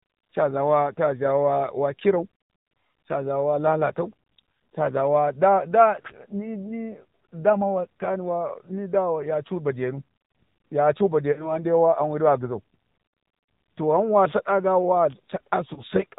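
AMR narrowband mobile codec damage runs through the whole speech clip. The band stops at 4 kHz, and the vocal-tract model, driven by sparse pulses, leaves the voice plainly buzzy and synthetic. That degree of damage fits one of the low AMR-NB modes, around 7.4 kbps.

Lost AMR speech frames occur at 11.32 to 11.58 s and at 15.74 to 15.82 s. The decoder stretches the last good pitch and tract settings with falling gain, so the sound smears and dips. The first gap, about 40 ms, fits two lost frames. The second, about 20 ms, fits one.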